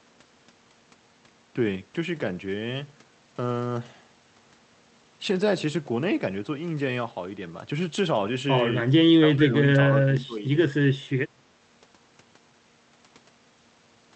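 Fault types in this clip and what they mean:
Speech suppressed in double talk: the speech level drops by around 20 dB in two stretches, 9.13 to 9.56 s and 9.89 to 10.44 s, each a few tenths of a second. This is likely an echo canceller misreading simultaneous talk as echo and attenuating the near talker.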